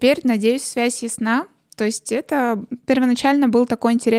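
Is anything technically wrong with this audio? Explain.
No, nothing technically wrong turns up anywhere in this speech recording.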